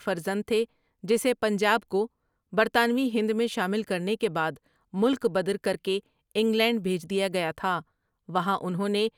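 Listening to the speech recording, nothing stood out as a technical problem at any point.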